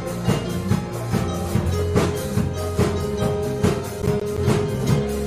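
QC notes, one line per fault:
4.02 to 4.38 s, processor overload crackle. A short burst of gritty crackle rides on the sound for about a third of a second, then stops. The processor could not finish its audio buffers on time. Several deadlines were missed close together, about five in all. Each miss dropped a slice of roughly 10 ms to silence. Those gaps start and end abruptly. Their hard edges click, and in quick succession the clicks merge into a tearing crackle.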